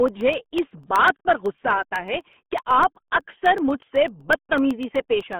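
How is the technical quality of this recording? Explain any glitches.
Quality is poor. The speech is heavily codec-degraded throughout and carries a steady train of small clicks.

Throughout, the RealAudio 14.4 codec squeezes the speech into about 8 kbit/s and cuts everything above 3.8 kHz, leaving it muffled, gargly and band-limited.

From 0.08 s to 5.33 s, periodic USB or driver dropouts blank about half a millisecond every 0.125 s, giving roughly forty evenly spaced ticks.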